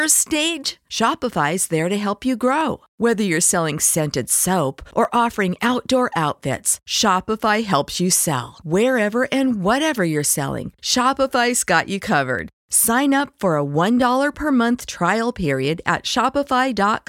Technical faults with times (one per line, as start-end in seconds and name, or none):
0.16-16.46 clock drift buffer slips